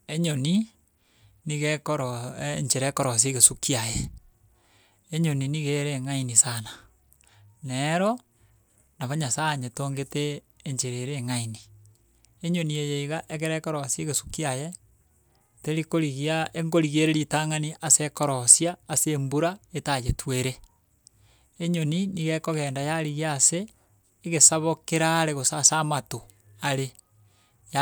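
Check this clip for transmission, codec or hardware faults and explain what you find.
Nothing turned up on this listen: the speech holds steady all the way along, with no faults to point to.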